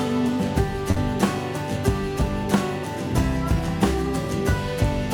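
At about 0.91 s a short concealed packet loss occurs: roughly 40 ms of audio failed to arrive at the decoder in time, and the receiver bridged the gap by extending the preceding sound for about 44 ms before crossfading back into the real signal near 0.99 s. Because the fill is an extrapolation rather than the true audio, that instant comes across as a brief smear or wobble.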